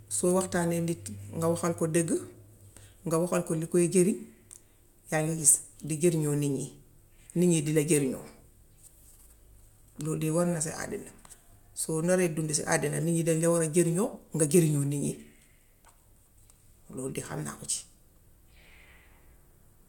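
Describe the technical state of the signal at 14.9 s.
At 14.9 s the speech signal is intact, with no fault audible at that moment.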